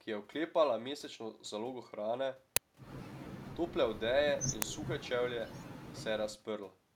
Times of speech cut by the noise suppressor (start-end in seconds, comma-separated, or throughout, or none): none